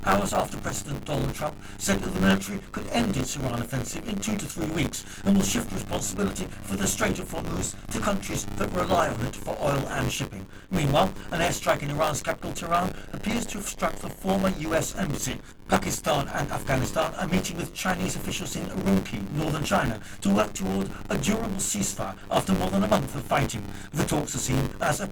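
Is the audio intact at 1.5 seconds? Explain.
No. At about 1.50 s there is an overlap between stream segments: the timestamps of two one-second segments overlap, and the player trims the shared span even though that audio was never duplicated. About 16 ms of real sound disappears and the waveform jumps, heard as a single click or tiny skip. Unlike a dropout, nothing goes silent; the sound simply lurches forward.

Buffer tearing is also present at that moment, as it is throughout. The writing program and the reading hardware have slipped, so in each buffer a slice of roughly 15% holds audio from about 20 ms earlier, with hard joins on both sides. This produces a continuous robotic buzz at 100 Hz, present only while there is signal. The steady buzz distinguishes it from the isolated skip of the segment overlap.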